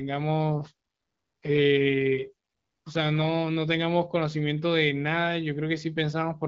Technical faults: none

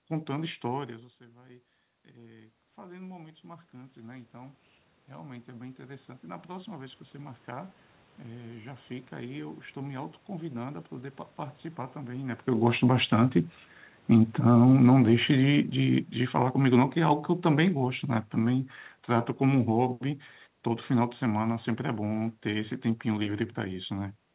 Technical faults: automatic gain rising; automatic gain falling

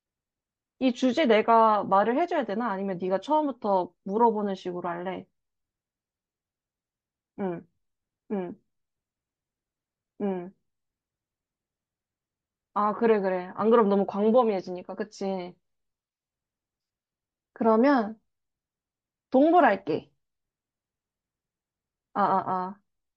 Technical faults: MP3 compression

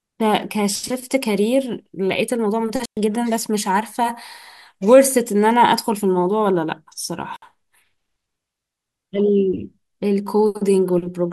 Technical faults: digital wireless dropout

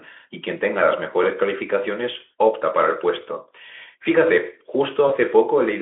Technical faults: VoIP packet loss concealed by the speech codec

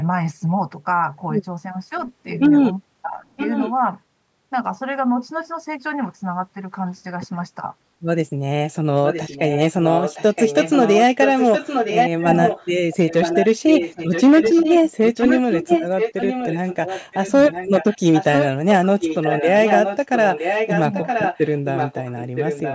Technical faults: echo leak; speech suppressed in double talk

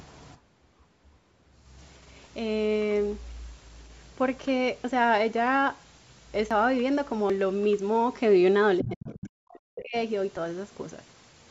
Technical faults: dropped buffer (overrun); other side's voice leaking through; speech suppressed in double talk

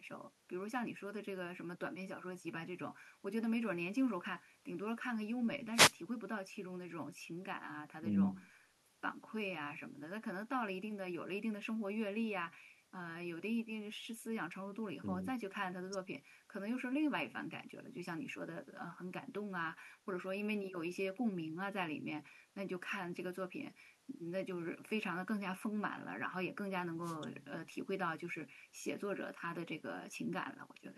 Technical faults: wireless microphone noise hit

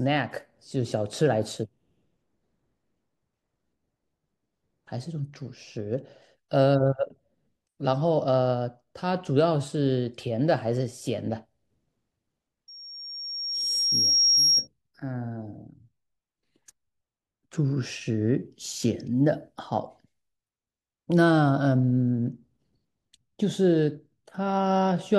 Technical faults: loudspeaker feedback squeal

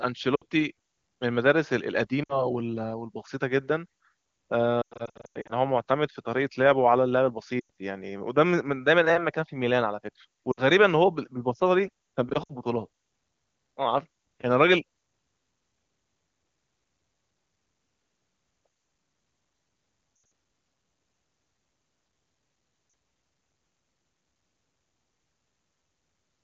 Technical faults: lost AMR speech frames

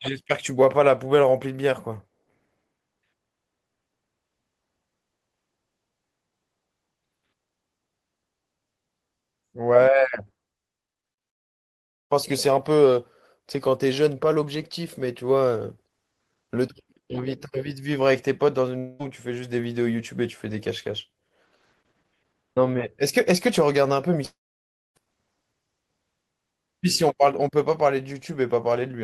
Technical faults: short concealed packet loss; long network dropout

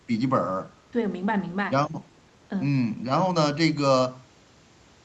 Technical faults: none

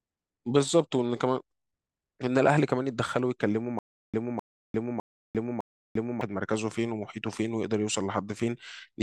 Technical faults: stutter with silent gaps

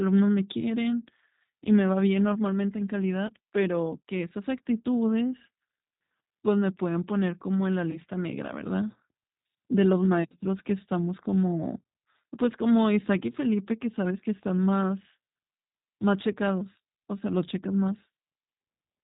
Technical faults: G.729 codec; VoIP packet loss concealed by the speech codec

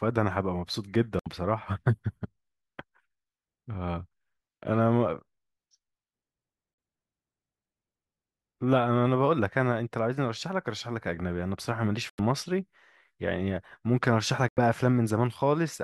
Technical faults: corrupt frame muted

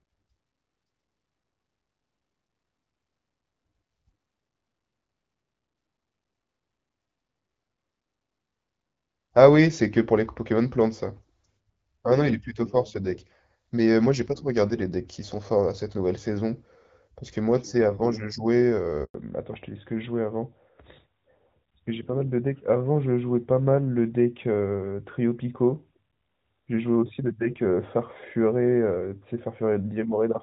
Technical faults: handover gap; fallback to narrowband

